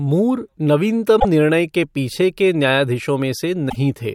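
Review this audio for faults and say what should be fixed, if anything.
Two bursts of damaged data in the compressed stream break up the speech, at 1.17 to 1.25 s and 3.66 to 3.76 s. Corrupt bytes make the decoder misread frames and lose sync. Each lands as a short glitch while it hunts for the next frame header. Fix this by re-sourcing or re-encoding from an intact file, and verify checksums on transfer.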